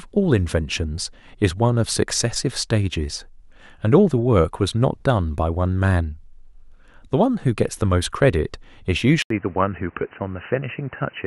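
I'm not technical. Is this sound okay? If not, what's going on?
No. At 9.22 s the recording most likely switched its input to a poorer device, such as a different microphone or a headset's call mode. That device captures a much narrower range of sound, with nothing above 3 kHz. After a brief gap of about 80 milliseconds, the speech becomes dull and boxy, a little quieter, and sits over a faint new background noise. It stays that way until the end of the clip.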